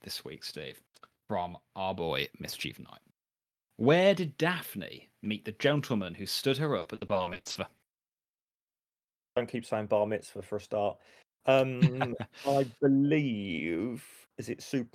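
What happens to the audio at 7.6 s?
At 7.6 s the speech is in the middle of a stretch of repeated packet loss (robotic sound) running from 6.79 to 9.27 s. Short holes keep opening across this span, each no longer than 60 ms, and every one is patched by stretching the sound just before it. About 960 ms ends up concealed, roughly 39% of the span, so the speech turns choppy, with pieces missing. Unlike a single dropout, the gaps recur in rapid succession.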